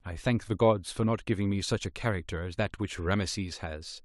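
No technical faults are audible.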